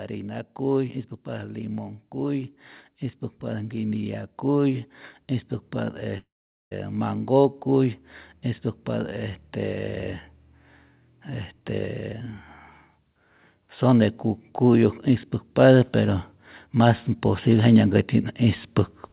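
From 6.18 to 6.73 s, likely a long network dropout: the speech smears into a fading buzz, then a flat, empty gap on the waveform and spectrogram.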